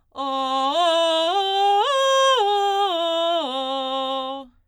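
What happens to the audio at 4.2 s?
Nothing goes wrong at 4.2 s: the music plays through that moment intact, with no dropout, click or distortion.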